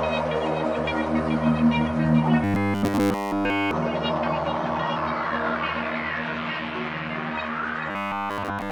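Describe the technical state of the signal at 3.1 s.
At 3.1 s the audio has robotic sound from repeated short buffers (2.44–3.71 s): a rigid 100 Hz buzz, likely from 10 ms buffers repeating in place of the skipped audio. The spectrogram shows evenly spaced harmonic lines, and the waveform shows identical repeating cycles.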